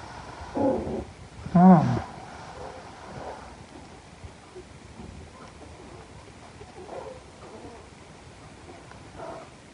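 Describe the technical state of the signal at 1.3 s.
At 1.3 s the signal is intact, with no dropout, distortion, glitch or other fault audible at that point.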